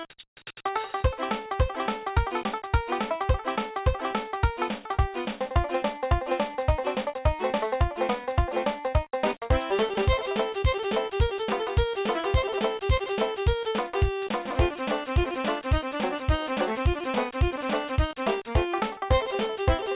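No technical faults can be heard anywhere in this audio, so there is nothing to describe in time order.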